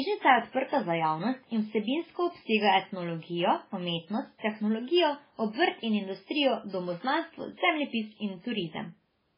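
MP3-style compression damage runs through the whole speech clip, most likely from an MP3 encoder starved of bits, which fits a very low bitrate around 16 kbps. Nothing survives above 5.3 kHz, so the speech sounds dull and lacks crisp s sounds. Weak frequency components drop in and out from frame to frame, giving a watery, swirling texture with metallic chirps on sibilants, and consonant attacks smear instead of landing cleanly.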